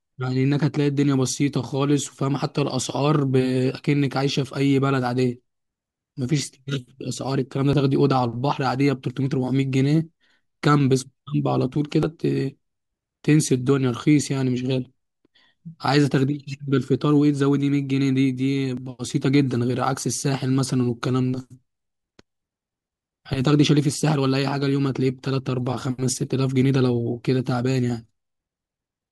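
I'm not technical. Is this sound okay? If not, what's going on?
No. The recording system likely fell behind and lost small chunks of speech, a dropped buffer (overrun). Each gap is stitched shut, so you hear a tiny jump at 7.73, 12.03, 18.77 and 26.13 seconds, the one at 12.03 longer.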